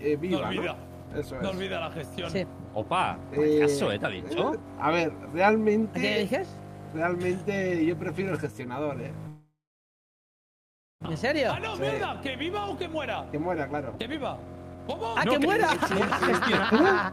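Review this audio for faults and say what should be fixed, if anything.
A long network dropout runs from 9.27 to 11.07 s. The sound stops arriving, and the receiver stretches the last bit into a brief fading buzz. After that, about 1.4 s is silent. Roughly a second of the original audio is never played, so the sound resumes further along. The likely cause is a stall in the network path that left the receiver with nothing to play. Prevent it with a more stable network route.

A jitter buffer speed-up follows from 12.6 to 15.47 s. After the gap, delayed audio seems to arrive in a bunch and the buffer holds more than it should. The receiver trims many tiny pitch-length slices to catch up. Playback runs at about 109% speed with unchanged pitch, so it sounds hurried. About 0.3 s is shaved off in total. Prevent it by letting the buffer catch up more gradually.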